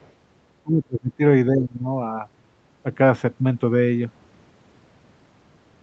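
At the very start, from 0.0 to 0.1 s, the echo canceller has likely let a little of the far end through: the other side's voice leaking through from the loudspeaker into the microphone. The residue sits far below the talker, around 35 dB down, so it registers only as a brief faint scrap before the clip proper gets going, heard within the same band-limited sound as the rest, with nothing above 8 kHz.

From 0.62 to 1.21 s and again from 1.5 to 1.86 s, the speech is suppressed in double talk, likely because the canceller could not tell the near talker apart from the echo while both were active and clamped down on everything. The first dip reaches around 30 dB and the second about 25 dB, the first lasting roughly half a second and the second about 0.4 s. The speech sinks, goes dull and breaks into pieces, then recovers in between.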